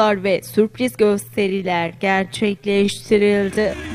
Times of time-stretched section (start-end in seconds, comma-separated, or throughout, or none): 1.00-3.94